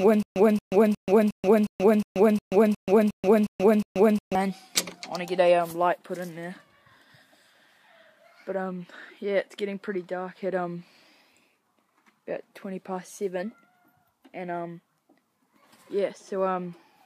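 Right from the start and running to about 4.35 s, there's a stutter with silent gaps: a 227 ms burst repeats eleven times, each followed by about 133 ms of dead silence, so it ticks every 360 ms. That's likely a stalled stream replaying its last fragment, with the missing audio gone.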